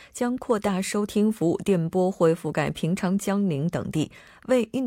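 No technical faults can be heard anywhere in the speech. There is nothing to place on a timeline.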